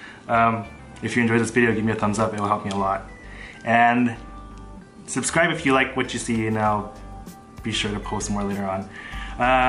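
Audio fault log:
4.27–4.32 s, repeated frames: A 46.4 ms block of sound plays twice in a row. That length fits two compressed frames being sent or stored twice, so the decoder replays them. It is heard as a brief stutter. The audio runs 46.4 ms longer.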